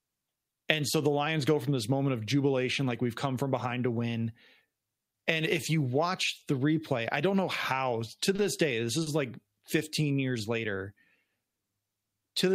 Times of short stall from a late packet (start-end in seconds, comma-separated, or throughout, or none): 8.35-8.41, 9.02-9.09